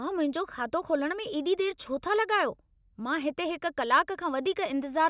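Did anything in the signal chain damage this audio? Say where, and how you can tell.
No, nothing along the chain has left a mark on this speech that I can hear, so there's no stage to point at here.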